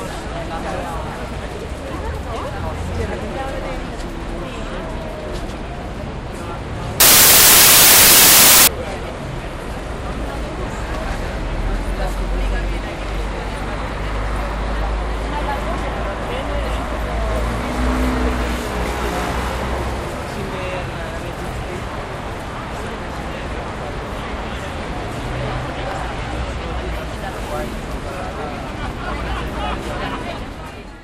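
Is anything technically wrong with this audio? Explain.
Yes. From 7.00 to 8.67 s the samples are built from the wrong bytes: the decoder assembles each sample misaligned or byte-swapped, so the rapidly changing low bits become the loudest part. The result is harsh, loud noise, close to white on loud sounds, unlike a steady added hiss.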